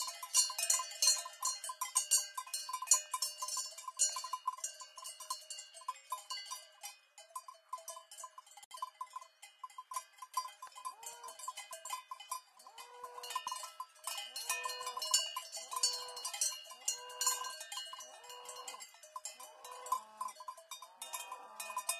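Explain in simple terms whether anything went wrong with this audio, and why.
The audio was encoded in separate pieces and then joined without trimming the edges. Each encoding pass adds a short stretch of silence at its start and pads out its final chunk, and at the join those extras stayed in. That is a gap at a join of encoded pieces: at 8.64 seconds the sound cuts out for about 66 milliseconds, with softened edges, then resumes at 8.71 seconds exactly where it left off.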